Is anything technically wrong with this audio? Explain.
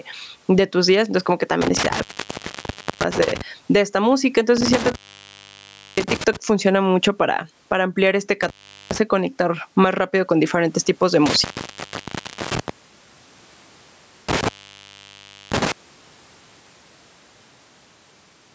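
Yes, there are two problems in this speech recording.

Gain pumping runs through the whole clip. The level swings by around 10 dB. This is likely from gain set far too high and a fast limiter clamping it.

Intermittent contact breaks the audio five times, at 1.61–3.41 s (after "como que"), 4.57–6.37 s (after "de esta música", returning at "funciona mucho para para"), 8.43–8.98 s, 11.26–12.70 s (after "con diferentes tipos de") and 14.29–15.72 s. A loose connection opens for roughly a second each time, about 0.4 s at 8.43 s. The sound drops to faint hiss, with crackle at each edge. The call-style band limit, with nothing above 8 kHz, is ordinary call processing.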